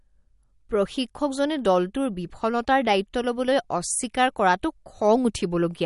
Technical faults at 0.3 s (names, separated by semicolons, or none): MP3 compression